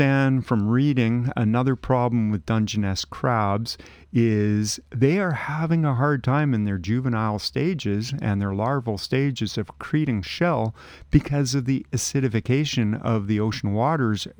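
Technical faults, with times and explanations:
throughout: imaging from linear upsampling. Dulled highs and a faint metallic shimmer on sibilants; straight-line interpolation, fitting a 24 kHz source, leaves weak mirror images at 12 to 24 kHz.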